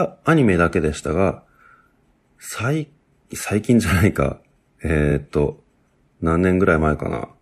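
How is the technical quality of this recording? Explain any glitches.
The recording has one glitch, at 5.07 to 5.12 s, where repeated frames occur. A short stretch of the compressed stream was delivered twice, so the decoder rendered the same 46.4 ms block back to back. That length fits a single compressed frame. You hear a brief stutter in the speech: a tiny slice plays, then plays again. The clip runs 46.4 ms longer as a result.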